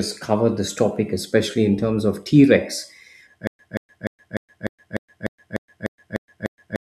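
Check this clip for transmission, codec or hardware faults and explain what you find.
There is one fault. From 3.47 s to the end, the speech turns into a stutter with silent gaps. A 179 ms fragment repeats 11 times, each followed by 120 ms of digital silence, every 299 ms. The stream likely stalled and replayed its last fragment at each retry. The audio meant for that stretch is lost.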